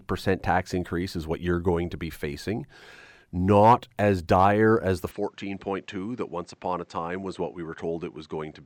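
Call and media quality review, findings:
Input switched to a poorer device, 5.11 s to end, after "as dire as the": no gap, band cut above 8.3 kHz, level down about 5 dB, new noise floor about 40 dB down. Likely capture-device change.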